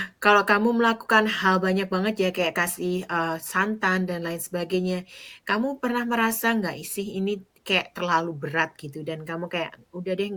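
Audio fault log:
No technical faults are present in the signal of this speech recording.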